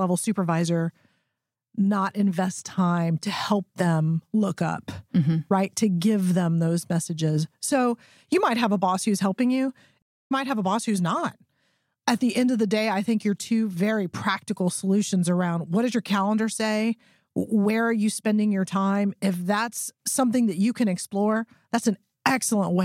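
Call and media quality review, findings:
Stream reconnect, 10.02–10.32 s: silent gap after "boss who's helping you", speech resuming roughly 0.15 s later; connection dropped, player reconnected and restarted decoding mid-stream.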